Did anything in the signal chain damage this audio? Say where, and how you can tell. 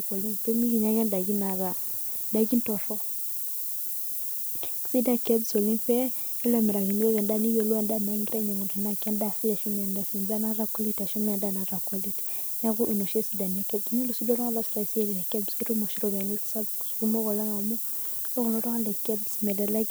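Yes. The damage happened at a sample-format conversion stage, where the speech was requantised to low bit depth with noise shaping. A steady, thin hiss runs through the whole clip, pauses included, and it climbs sharply toward the top of the band. That tilt is the noise shaping: the rounding error from a 5-bit word is fed back and pushed up in frequency. The noise sits only a few decibels below the speech itself.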